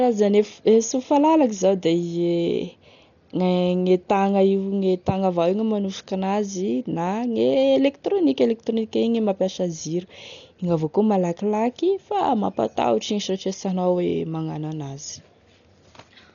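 It's a speech clip, and all the way through it sounds dull, with nothing above about 6.9 kHz and a rough, fluttery hiss hanging around the voiced sounds. That's heavy damage, likely from Dolby Digital compression at a very low rate, which fits something around 40 kbps. The encoder has cut the band short and left many frequency lines without real detail, so the decoder fills them with noise. That's the grainy texture you hear.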